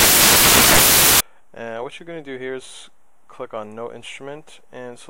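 From the start to 1.20 s the audio is buried under loud, broadband hiss: samples built from the wrong bytes. The reader misassembles each sample, so the rapidly changing low-order bits land in the most significant position and dominate every value. Unlike ordinary background noise or dither, which sit at a steady level beneath the signal, this noise is loud and harsh.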